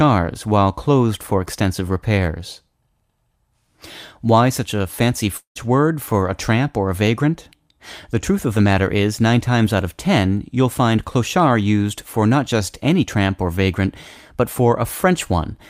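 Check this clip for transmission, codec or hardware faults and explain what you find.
Two kinds of trouble show up, both bunched around the 5.4 to 6.1 second mark, right after "such a fancy".

The first is what sounds like a long network dropout, from 5.37 to 5.57 s. The speech stops arriving and the receiver fills in by stretching the last bit of sound, which comes out as a buzzy tail that fades away, ending in about 110 ms of near silence. Roughly 180 ms of the actual speech never plays. When the audio picks back up, that chunk is simply gone. The likely cause is a burst of packets that went missing in transit.

The second is a lost packet rebuilt from error correction, which happens three times: 5.55 to 5.57 s, 5.64 to 5.66 s, and 6.08 to 6.14 s. Each time a 20 ms packet dropped out, but the next packet was carrying a low-bitrate backup copy of it, and the decoder played that copy. So there's no hole, just a short stretch that sounds rougher and grainier. 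The last one also adds about 9 ms of extra length.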